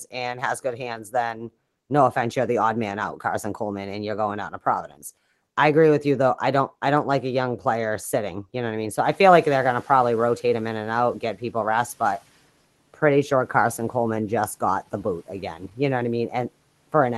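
Speech turns faint and swallowed at 0.64 to 1.14 s, 1.33 to 1.49 s before "no offense you're the", and 4.88 to 5.03 s before "I agree with you". This is speech cut by the noise suppressor, which took it for noise and lowered it by about 10 to 12 dB.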